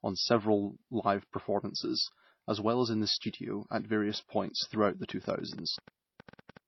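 Speech runs through the whole recording with two kinds of damage. Throughout, there is a dull, band-limited tone with smeared, swirly high end and gritty pre-echo together. That mix points to transcoding between lossy codecs, most likely a low-rate MP3 encode, around 24 kbit/s, later re-encoded as HE-AAC near 48 kbit/s. The second codec spent its bits on the first one's artefacts and added its own, while the earlier, lower bandwidth cut-off remained. A single encode would show one codec's signature, not both layered. Right after "in the studio at", from 4.14 s to 6.58 s, a train of clicks ticks over the sound. It is roughly fifteen similar pulses, about 6.6 per second, unevenly spaced and about as loud as the speech, probably from electrical interference or a faulty connection. Their matching shape and steady density set them apart from random crackle or codec glitches.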